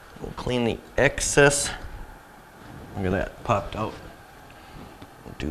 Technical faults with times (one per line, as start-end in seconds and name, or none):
none